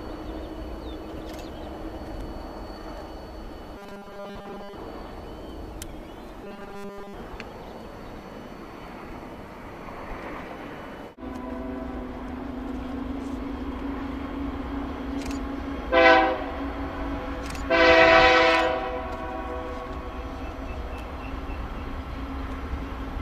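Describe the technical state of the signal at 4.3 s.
At 4.3 s the audio has robotic sound from repeated short buffers, running from 3.78 to 4.75 s. It is a rigid, metallic buzz at 200 Hz. Most of this stretch is likely a repeated 5 ms buffer filling gaps where new audio arrived too late.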